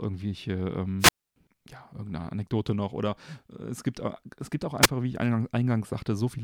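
A brief swell of hiss at 0.99 s drops into near silence of about 276 ms before the speech returns at 1.36 s. At 4.82 to 4.88 s there is only a short burst of static with no real gap. Both are wireless microphone squelch dropouts, where the radio signal fades far enough for the receiver's squelch to mute its output.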